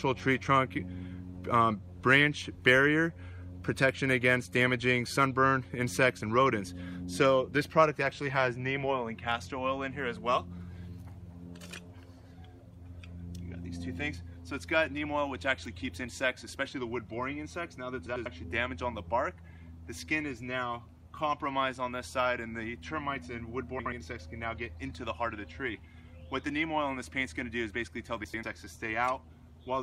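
Frames out of order: neighbouring blocks of roughly 96 ms (about 64 ms at 23.79–23.92 s) arrived swapped and were decoded that way, exchanging halves into a garbled flutter at 18.07–18.26 s and 28.24–28.44 s.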